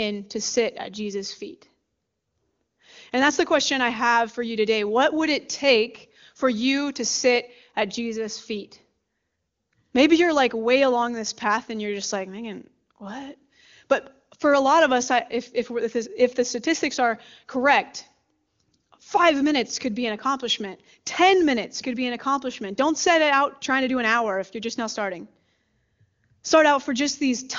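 No faults: the speech runs over the AMR wideband (HD Voice) codec, and its clarity fits the top mode at 23.85 kbit/s.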